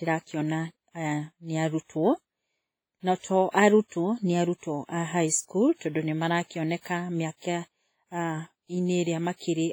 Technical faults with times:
0.00-9.72 WMA compression

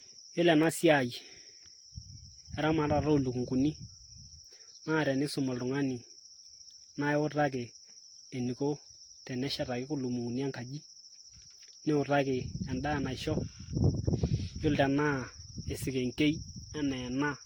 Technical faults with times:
0.00-17.45 generation loss

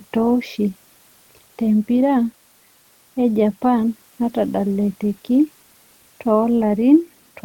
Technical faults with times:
none

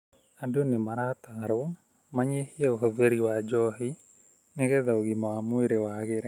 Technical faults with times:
0.63-3.05 call bitrate drop

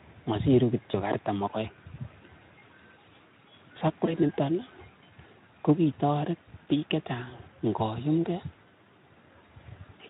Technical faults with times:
0.91-0.95 VoIP packet loss concealed by the speech codec
4.05-4.20 VoIP packet loss concealed by the speech codec

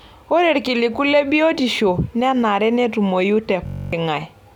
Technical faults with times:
3.67-3.93 system hang loop

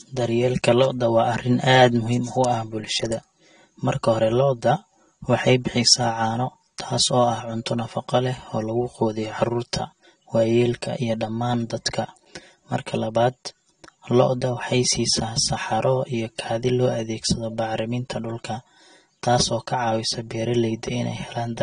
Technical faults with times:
0.00-21.62 channel delay (comb filtering)
0.00-21.62 AAC compression

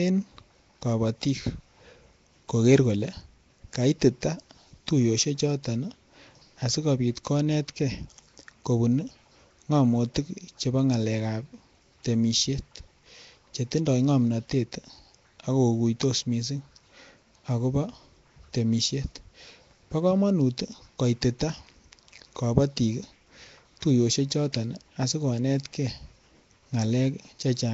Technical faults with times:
0.00-27.73 Nellymoser compression

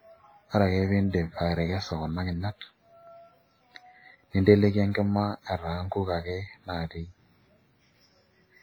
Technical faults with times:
0.00-8.62 WMA compression

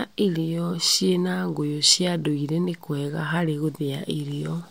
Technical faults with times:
0.13-4.68 clock slip clicks

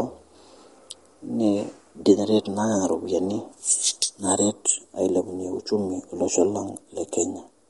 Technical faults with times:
0.00-7.70 MP3 compression

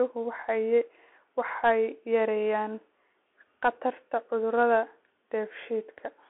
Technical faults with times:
0.00-6.30 Bluetooth CVSD headset codec

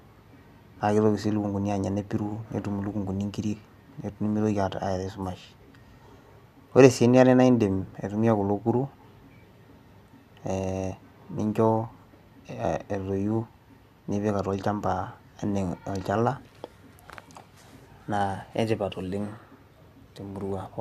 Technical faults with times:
none

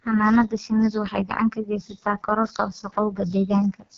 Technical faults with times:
0.00-3.97 AMR wideband (HD Voice) codec

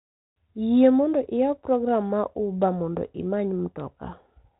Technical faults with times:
none

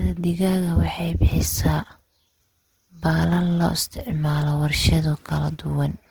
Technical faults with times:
0.00-6.11 Opus compression

